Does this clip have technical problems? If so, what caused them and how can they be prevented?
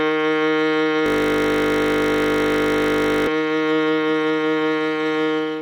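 Yes. A system hang loop runs from 1.06 to 3.27 s. The system froze while the audio hardware kept replaying one 20 ms piece of the music about 110 times, producing a steady 50 Hz buzz. Stable drivers and unblocked real-time audio threads prevent this.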